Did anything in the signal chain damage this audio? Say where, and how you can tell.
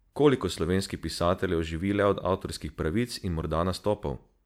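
No, nothing in the chain audibly damaged this speech.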